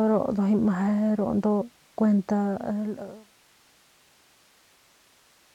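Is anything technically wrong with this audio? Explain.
No, nothing is technically wrong with this audio.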